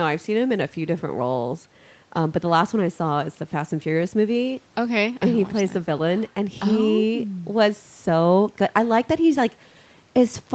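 No technical faults can be heard anywhere in this speech. The audio stops at about 8 kHz, as expected of a normally working call microphone chain and Opus codec, with only the codec's usual coding noise.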